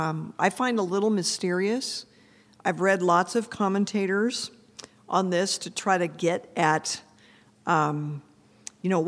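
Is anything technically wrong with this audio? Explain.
No, the speech signal shows no technical faults anywhere in the recording.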